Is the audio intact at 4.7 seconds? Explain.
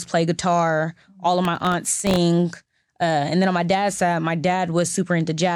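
Yes, at 4.7 seconds the speech plays through intact, with no dropout, click, distortion or other audible fault at that point.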